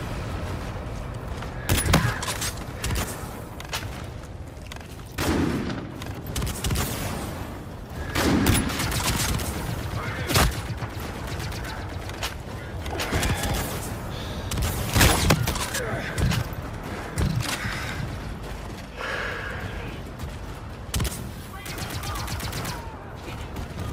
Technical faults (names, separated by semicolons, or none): none